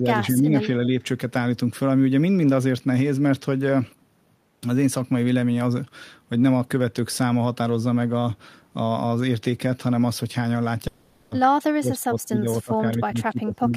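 The speech in this recording shows two faults. The first is speech suppressed in double talk. Most likely, the echo canceller could not tell the near talker from loudspeaker echo while both sides spoke at once, so it pulled the level down. The voice dips by about 10 dB from the start to 0.7 s, affecting roughly half a second. Later it sinks more steeply: about 25 dB from 11.62 to 12.46 s, about 20 dB from 12.62 to 12.85 s, and about 20 dB from 13.03 s to the end. The second is a long network dropout at 10.87 to 11.33 s, likely from packets failing to arrive for 440 ms. The receiver covered the whole gap with continued sound rather than silence, so a fading, buzzy extension of the last sound replaces the real audio. The speech then resumes further on with that 440 ms missing.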